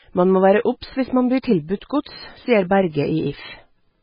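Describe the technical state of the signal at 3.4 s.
At 3.4 s the speech carries heavy MP3 compression damage, which runs through the whole clip. Nothing remains above about 5.1 kHz, so the sound is dull and muffled. Weak frequency detail flickers in and out between frames, giving a watery, swirling texture. S sounds turn metallic and chirpy, and onsets smear. The likely cause is an encoder starved of bits, which fits a bitrate around 16 kbps.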